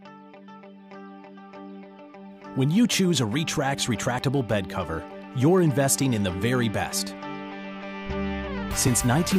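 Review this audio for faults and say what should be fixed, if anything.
Jumps at 5.11 s and 8.88 s skip ahead without silence, skipping about 10 ms and 5 ms, unlike a silent dropout: a likely dropped buffer (overrun). Prevent it by reading input promptly, with larger buffers or higher capture-thread priority.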